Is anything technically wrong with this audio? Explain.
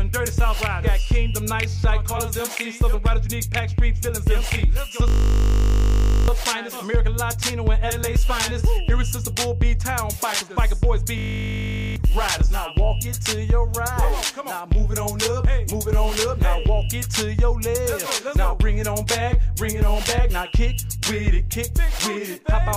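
Yes, there are two system hang loops, from 5.08 to 6.28 s and from 11.18 to 11.96 s. The system froze while the hardware kept replaying one 20 ms ring buffer, so the sound collapses into a steady 50 Hz buzz, losing about a second and most of a second of audio respectively.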